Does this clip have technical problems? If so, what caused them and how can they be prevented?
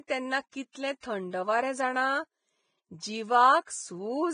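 Yes. The speech sounds hissy and grainy throughout, with nothing above 9.7 kHz and roughened, smeared detail. That points to heavy Vorbis compression, likely at a low bitrate, roughly 20 kbps, where the treble gets quantised into noise. Encoding at a higher quality setting would prevent it.

There's also pre-echo at 0.50 to 0.53 s and 1.00 to 1.03 s, about 30 ms each. The codec spreads quantisation noise across a whole block, so a short hiss arrives just before sharp onsets and blurs them. A higher bitrate or shorter transform blocks would avoid it.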